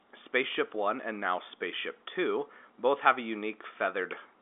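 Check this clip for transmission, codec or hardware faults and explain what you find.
No transmission, codec or hardware fault can be heard: the speech arrives as ordinary G.711 telephone coding, with the band running from about 250 Hz to 3.5 kHz, nothing above roughly 3.7 kHz, and at most a faint trace of the codec, which fits a standard 64 kbps A-law line.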